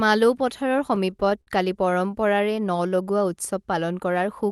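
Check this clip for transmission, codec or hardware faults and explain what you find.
Two kinds of trouble here, both on the receiving end of a call path whose top end stops around 12 kHz, which fits a super-wideband Opus setup.

Repeated stalls (stutter) hit from 0.95 to 1.49 s, with six gaps up to 60 ms, and again from 1.85 to 2.13 s, with four tiny gaps. Packets arrived late, the jitter buffer kept draining, and the receiver stretched the last sound each time. Nothing's lost, but it drags and stutters.

Jitter buffer slow-down runs from 2.83 to 3.09 s. The buffer was refilling by repeating pitch periods, adding 38 ms, so the sound plays at about 88% speed, drawn out at the same pitch.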